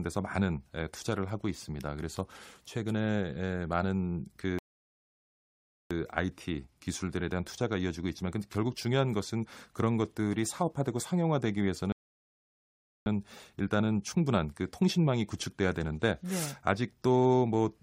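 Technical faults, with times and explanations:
4.59–5.91 s and 11.92–13.06 s, rebuffering stall: The speech drops to silence twice, for 1.32 s and then 1.14 s. Each time it picks up exactly where it stopped. The player ran short of downloaded audio and waited for more. Nothing is lost, but time is added.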